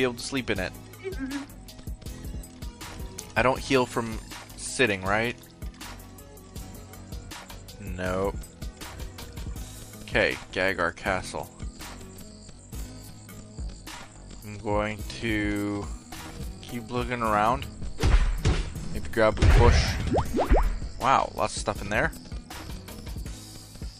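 From 12.19 s to 17.27 s the audio carries a time-stretched section, most likely where software slowed a stretch down to fill a longer slot while holding its pitch. Playing at about 0.66 times normal speed, the stretch repeats short slices of the waveform to pad out the time, so the pace suddenly drags while the pitch stays put. Normal pace returns at 17.27 s.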